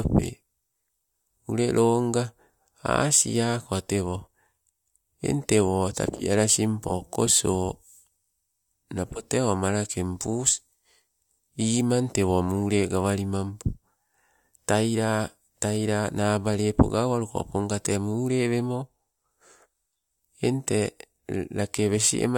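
No technical faults can be heard anywhere in this recording.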